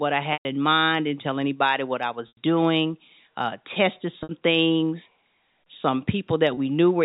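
Packets were lost in this telephone-band speech recording four times, and the receiver filled each gap by repeating the last pitch period. The shorter gaps are heard as a briefly held, buzzy tone, while the longer ones fade into silence before the speech returns: at 0.33 to 0.45 s, about 120 ms long, before "in mind didn't tell"; at 2.28 to 2.37 s, about 90 ms, before "doing uh tested"; at 4.23 to 4.29 s, about 60 ms, after "doing uh tested"; and at 6.54 to 6.57 s, about 30 ms.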